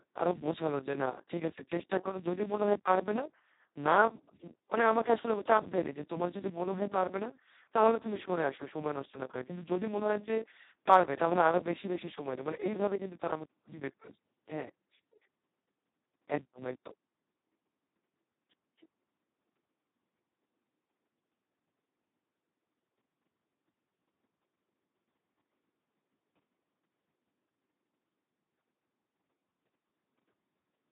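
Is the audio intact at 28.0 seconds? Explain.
No, the Speex codec runs through the whole clip, including 28.0 s, with so few bits for the excitation that the speech turns hoarse and robotic. Nothing remains above 3.9 kHz, and the bitrate is roughly 2 kbps.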